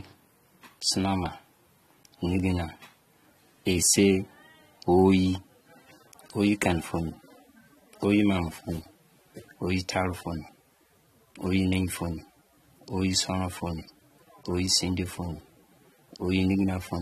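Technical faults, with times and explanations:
Throughout, AAC compression: nothing is heard above 13.8 kHz, and the speech sounds dull and smeared, with fizzy sibilants and a warbling texture. The likely cause is an AAC-LC encoder quantising each frame's spectrum coarsely, which fits a bitrate around 32 kbps.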